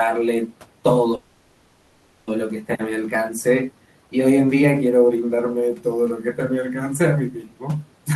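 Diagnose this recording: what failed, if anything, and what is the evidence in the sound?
Network stage: a call audio freeze from 1.15 to 2.30 s, likely packets delayed until the jitter buffer emptied; a held buzz fills 1.12 s, then speech resumes intact but late.

Call processing: speech cut by the noise suppressor at 7.31–7.65 s, which mistook speech for noise; about a fifth of a second sounds swallowed, dipping by about 13 dB.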